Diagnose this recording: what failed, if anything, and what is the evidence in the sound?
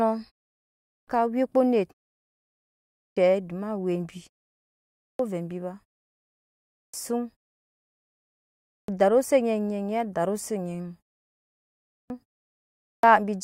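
The failure is a clipped start after a pause, at the playback stage: the output device sleeps during silence and needs about 0.33 to 0.40 s to wake. Each time sound resumes after a gap of roughly half a second to 1.2 s, its beginning is swallowed. This happens at 0.73, 2.82, 4.86, 6.55, 8.52 (before "darusi onyi"), 11.75 and 12.63 s. Muted pauses lose only background, but here the onsets themselves are missing.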